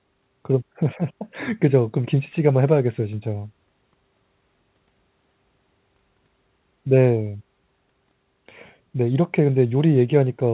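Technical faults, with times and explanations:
No technical faults are audible.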